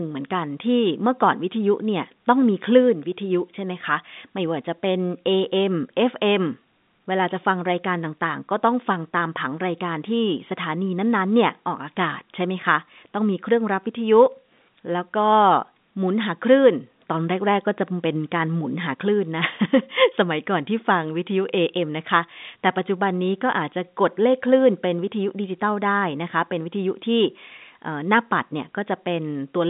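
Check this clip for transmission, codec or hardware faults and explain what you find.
The speech comes over a standard G.711 A-law telephone path at 64 kbps, with the sound confined to the usual line band of about 150 Hz to 3.7 kHz, nothing above 3.8 kHz, and no more than a faint trace of coding noise, and nothing in the clip departs from that normal behaviour.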